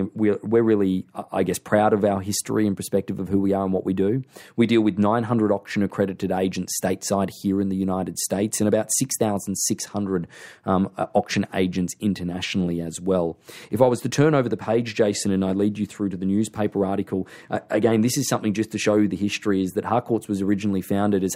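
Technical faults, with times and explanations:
0.22–21.34 s, clock slip clicks: faint regular ticks, about seven a second, over a hundred across the speech. Two devices likely run on unsynchronised clocks around 100 ppm apart, so a single sample is dropped or repeated each time the drift adds up.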